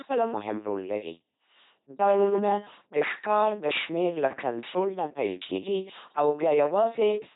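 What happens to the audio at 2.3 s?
From 2.02 to 2.39 s the speech becomes robotic sound from repeated short buffers. It has a rigid, metallic 200 Hz buzz. The likely cause is about half the audio being replaced by repeats of a 5 ms buffer. Throughout, including here, the LPC-10 vocoder damage is heavy. The speech buzzes mechanically and has nothing above 3.8 kHz, which fits a 2.4 kbit/s rate.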